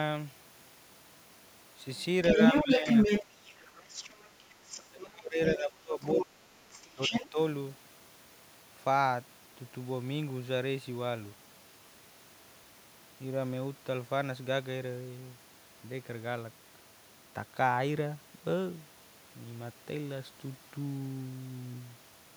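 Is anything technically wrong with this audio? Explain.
Yes. From 1.97 to 5.02 s, then at 5.47–5.63, 6.02–6.24 and 6.72–7.28 s, there is other side's voice leaking through. A second voice sits under the talker, a little louder at first, later quieter or level with them. The likely cause is a loudspeaker echo that the canceller left in the microphone. Unlike suppression, this adds a voice rather than removing one.

Speech suppressed in double talk also occurs, briefly at 2.35–2.87 s with a slight dip, then heavily from 4.87 to 7.38 s, where the talker drops by about 30 dB for roughly two seconds in pieces. The likely cause is an echo canceller ducking both voices while the sides overlap. The talker's own level falls away instead of an extra voice appearing.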